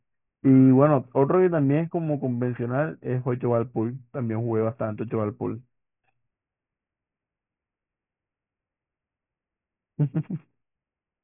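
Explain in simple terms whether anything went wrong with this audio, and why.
Aliasing runs throughout: highs above 3 kHz weren't filtered out before the rate dropped, so they fold back as gritty false tones, rather than simply sounding muffled.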